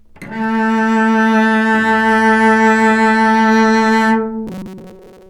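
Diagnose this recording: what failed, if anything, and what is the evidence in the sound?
From 4.47 s onward, a rigid metallic 188 Hz buzz: robotic sound from repeated short buffers, likely a starved driver buffer looping 5.3 ms chunks.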